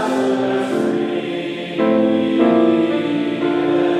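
Nothing in the audio stood out as a technical problem on listening.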